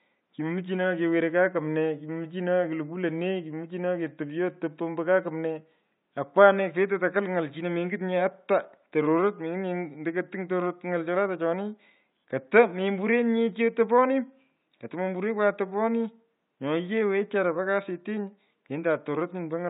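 No technical faults are audible.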